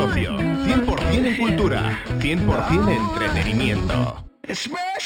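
Throughout the clip there is imaging from linear upsampling. The rate was raised from 12 kHz to 44.1 kHz by joining samples with straight lines. That filters poorly. The top end sounds dulled. A mirrored copy sits between 6 and 12 kHz, roughly 25 dB down, adding a faint metallic shimmer.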